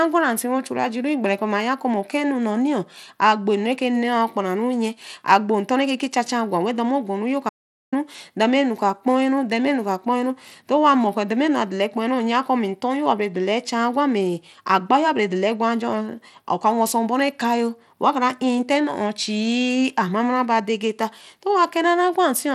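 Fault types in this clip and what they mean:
Bluetooth SBC compression: likely SBC coding near 96 kbps, leaving plainly audible grit and flickering treble; the spectrogram shows nothing above 15.8 kHz and blocky sub-band patches.
Audio dropout to silence: the speech cuts out for about 431 ms, likely a lost input link; the waveform drops to silence, a blank vertical stripe on the spectrogram.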